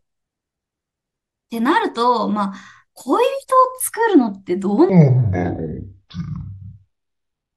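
From 4.9 s to the end, a section at the wrong speed: the speech plays at half speed, dropping around ten semitones, likely from a clock mismatch. Unlike a pitch shift, tempo slows too, so syllables stretch out deep and sluggish.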